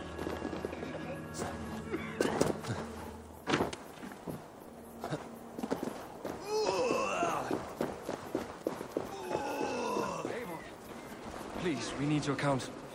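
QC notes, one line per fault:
0.02–10.23 s, train of clicks: ticking and popping sits over the sound from the very start, about 8.4 clicks per second at an uneven pace, roughly a hundred in all, each much the same shape and peaking at about the level of the sound itself. The repeated similar pulses likely come from interference from nearby equipment or a faulty connection or power supply, injecting a short spike each time.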